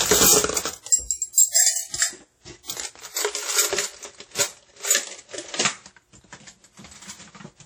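All the way through, the sound has a ringing, washy quality, with hiss that swells and fades along with the signal and nothing above 18.9 kHz. That's likely WMA compression, and the heavy damage fits a low bitrate around 32 kbps, with long transform blocks smearing noise across time.

Around 1.33 to 1.38 s there's pre-echo: a short hiss creeps in about 46 ms before a sharp attack, which then lands soft and smudged. The codec spread noise meant for the loud hit evenly across its block, so it spilled into the quiet moment just before.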